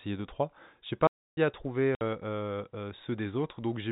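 A short speech recording over a telephone-band channel, with the narrow sub-4 kHz sound of G.711 A-law coding, has two separate gaps. From 1.07 to 1.37 s the speech halts for about 0.3 s, a playback stall, likely from the player running short of data or being blocked, before resuming with "à trouver". Its length and clean pickup set it apart from a dropout. Later, at 1.95 to 2.01 s, just after "à trouver", a 60 ms hole with hard edges cuts into the speech. This is packet loss filled with silence, and its length fits two 30 ms packets. Unlike the stall, it is brief, tied to packet length, and the speech carries on past it rather than waiting.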